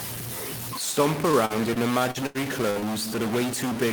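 A data bit likely stuck at one value throughout the converter path adds distortion across the whole speech clip and fills pauses with noise. From 1.31 to 2.91 s, repeated packet loss leaves eight gaps, up to 81 ms each, patched by extending earlier sound, giving choppy speech with pieces missing.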